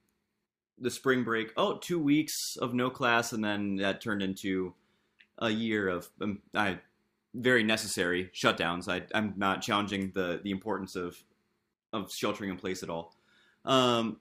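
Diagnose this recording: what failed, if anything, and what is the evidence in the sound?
Nothing failed in this recording, and the sound gives no evidence of a fault at any stage.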